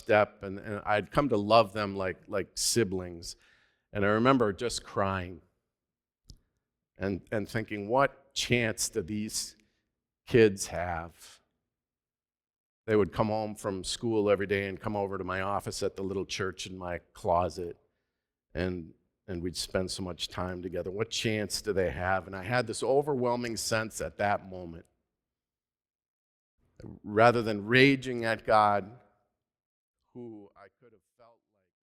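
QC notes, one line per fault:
Nothing stood out on listening, and the smooth fade-out over roughly the last two seconds, ending at 31.8 s, leaves no click or hard edge.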